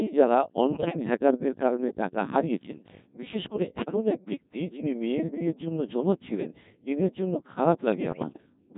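The whole recording runs through the Codec 2 vocoder, and the damage is heavy. The decoder rebuilds the voice from pitch, voicing, energy and a coarse spectral envelope, drawing it with sine waves. The original waveform is gone. The speech sounds robotic and buzzy throughout. The thin, smeared detail fits a very low rate, near 1.6 kbit/s.

Bit errors on digital voice radio strike three times. The first runs from 0.72 to 0.97 s. The second runs from 3.76 to 3.96 s. The third runs from 8.12 to 8.46 s. Each flipped bit corrupts the pitch, level, voicing or spectrum of a whole vocoder frame. The lengths fit roughly five, four and seven frames. About a tenth of the bits are wrong in the first and last bursts, more in the middle one. The voice lurches in pitch and loudness and shifts colour abruptly. It collapses into warbles, bleeps and robotic gibberish.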